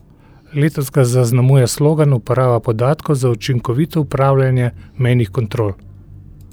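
No technical faults can be heard anywhere in this speech recording. Nothing in the sound at any moment points to a problem in how it was captured or delivered.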